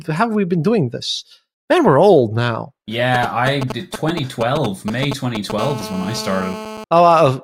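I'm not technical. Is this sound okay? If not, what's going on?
No. From about 3.15 to 5.6 seconds, a galloping dit-dit-dit of short raspy buzzes cuts across the speech, fairly loud. These are GSM signalling bursts. An older 2G mobile phone close to the recording equipment was sending short radio pulses as it talked to the network, and the audio circuitry picked them up and turned them into sound. They pulse at about 217 times a second.

At 5.6 seconds the galloping turns into a steady, hard, raspy GSM phone buzz that continues until about 6.84 seconds. It sits a bit lower under the speech but has a harsh, gritty edge. This is the same phone now transmitting in steady bursts, as it does during a call, about 217 times a second. The audio circuit again converts those radio pulses into a buzz that has nothing to do with the speech itself.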